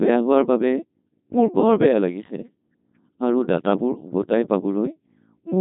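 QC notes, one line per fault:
throughout: Codec 2 vocoder, speech rebuilt from sine waves, robotic and buzzy rather than smeared, nothing above 3.8 kHz; heavy damage fits about 2.4 kbit/s.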